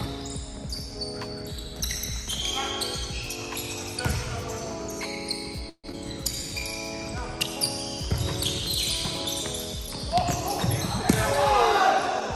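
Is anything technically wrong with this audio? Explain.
Yes, there are three closely spaced timing faults around the six-second mark.

From 5.69 to 5.86 s there is a call audio freeze. The last sound carries on as a fading buzz for about 140 ms, the final 70 ms of it silent. This likely happened because delayed packets let the jitter buffer run empty. On a spectrogram the final frame smears horizontally and then blanks. In the waveform the envelope decays to flat before the audio resumes intact.

At 5.92 to 5.95 s there is a skip ahead. Roughly 70 ms of audio is dropped, probably because the buffer overflowed with later packets already queued, and the two sides are joined almost directly. The waveform shows an abrupt discontinuity. The spectrogram shows a vertical seam where the harmonic patterns change suddenly.

From 6.35 to 6.73 s there is a jitter buffer slow-down. The buffer rebuilt its reserve by repeating single pitch periods or bits of pauses, adding 75 ms so this stretch plays at about 82% speed with unchanged pitch. 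Sounds are drawn out. The waveform shows repeated short segments, and the spectrogram shows stretched harmonics at the same frequencies.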